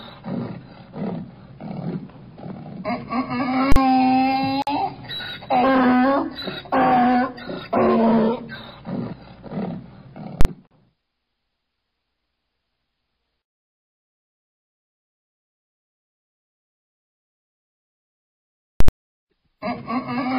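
At 3.72 s there's a 40 ms block of invalid numbers at full scale: a calculation blew up to infinite or invalid values, so the output jams at one extreme, far past the audio's peaks. It comes through as a very loud pop or bang with nothing underneath, and it happens again at 10.41 s (40 ms) and 18.80 s (80 ms).

At 4.62 s there's a gap at a join of encoded pieces, about 49 ms of dropout in the sound. The pieces were encoded separately and stitched together without trimming the encoder's start delay or the padding on the last frame. The edges are smeared, then the sound carries on. It fits pieces cut every 6 s.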